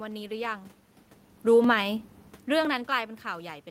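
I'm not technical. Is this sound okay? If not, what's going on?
No, not quite. From about 0.64 s to 3.65 s there's a click roughly once a second, about four in all. These are clock drift buffer slips, likely from two devices whose clocks disagree, so a tiny sliver of sound gets dropped or repeated.

Between 1.36 s and 1.78 s the automatic gain is falling: the level sinks a little, and the room noise behind it drops along with it. The volume changes near 1 s and 2 s are just the talker moving.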